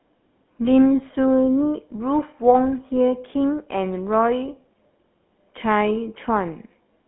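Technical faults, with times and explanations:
Throughout, GSM full-rate codec: the speech has a plainly audible buzzy, gravelly roughness because a vocal-tract model is driven by sparse, regularly spaced pulses. The band runs 200 Hz to 3.4 kHz, with nothing above 3.8 kHz, which fits 13 kbps full rate.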